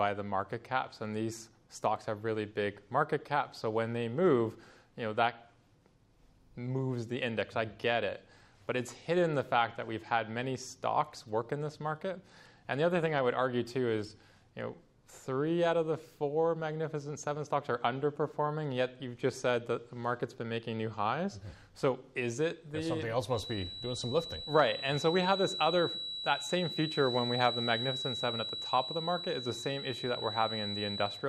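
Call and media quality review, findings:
Feedback whistle, 23.26 s to end of clip: thin single-pitch tone at 3.9 kHz, roughly 10 dB under the sound. Likely cause: loudspeaker-to-mic loop sitting at the edge of feedback. Unlike a full howl, it never builds.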